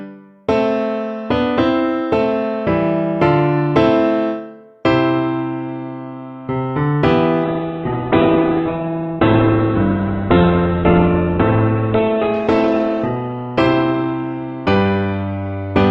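At 7.45 s a call bitrate drop sets in and lasts to the end at 15.90 s. The encoder is starved of bits, falling from what sounds like about 64 kbps toward roughly 7 kbps. Audio bandwidth narrows from 20 kHz to 4 kHz, and the sound turns muffled and coarse, staying at its worst for about 3.6 s.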